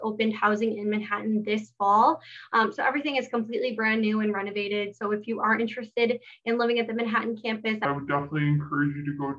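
From 7.85 s to the end of the clip, a wrong sample rate fault makes the sound drop to about 0.69 times its proper speed and about 6.5 semitones lower in pitch, which fits material recorded at 32 kHz being played at 22 kHz with no conversion. It sounds slow and sagging. Unlike a pitch shift or a time stretch, pitch and tempo fall together by the same ratio, and the timbre darkens with them.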